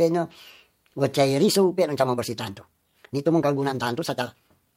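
At 1.35 s the speech abruptly quickens to about 1.58 times its earlier pace and stays there to the end, with pitch unchanged. It sounds rushed, likely a time-stretched section where software dropped short slices to shorten it while preserving pitch.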